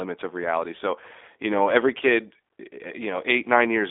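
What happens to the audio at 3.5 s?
At 3.5 s, as throughout, the speech carries G.729 codec damage: rebuilt from a vocal-tract filter and sparse pulses, it sounds rough and synthetic, with nothing above 3.7 kHz.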